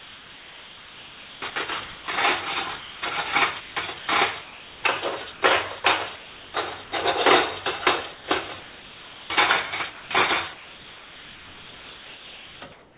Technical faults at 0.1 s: sound chopped by the voice detector

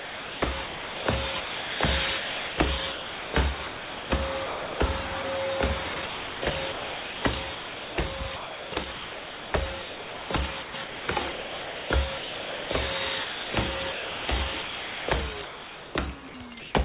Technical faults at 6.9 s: sound chopped by the voice detector

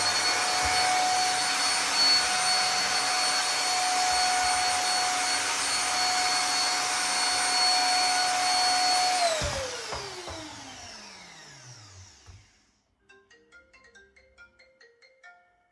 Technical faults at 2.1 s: none

